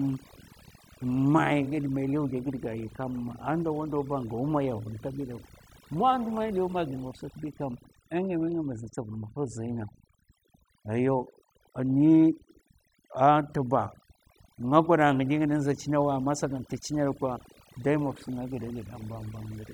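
From start to finish, the pauses sink to near silence dotted with twinkling specks. That is overdone noise removal: a noise reducer set too hard pulls individual frequency bands down or off near its noise estimate, taking quiet speech detail with them.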